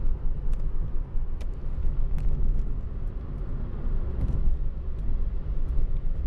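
Nothing in the recording stood out as a technical problem on listening.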